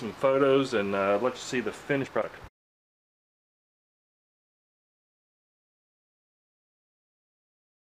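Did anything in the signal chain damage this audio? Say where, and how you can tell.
Yes. From 2.01 to 4.47 s the audio runs 1.89 times faster at unchanged pitch. This is a time-stretched section, likely from processing software dropping pieces. A resampling error would raise pitch instead.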